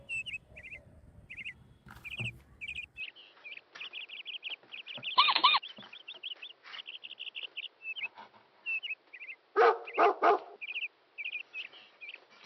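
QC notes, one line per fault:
3.0 s to end, input switched to a poorer device: the sound abruptly turns dull and boxy with nothing above 5.8 kHz and a faint new background noise about 35 dB below the signal, with no gap or level jump. The input likely moved to a narrower-band microphone.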